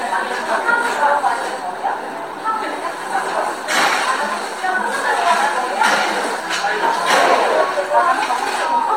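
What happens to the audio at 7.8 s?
Nothing goes wrong at 7.8 s; the sound passes through that moment intact, with no dropout, click, distortion or other fault to be heard.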